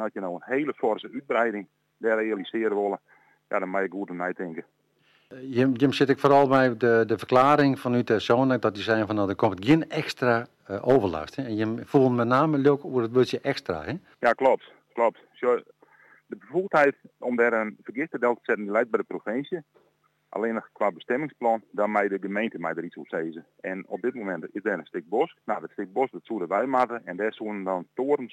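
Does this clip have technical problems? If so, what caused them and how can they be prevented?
No, this clip has no technical problems, so there is nothing to prevent.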